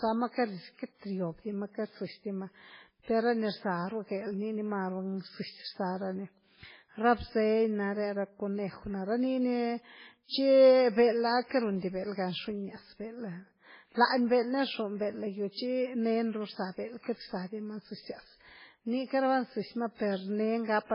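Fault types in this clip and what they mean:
MP3 compression: heavy, likely from a very low-bitrate MP3 encode; the spectrogram shows a hard ceiling at 5.3 kHz with flickering, patchy holes beneath, sounding watery.
pre-echo: codec noise spills ahead of an attack at 19.94 s, seen as a 54 ms band of hiss before the onset, softening it.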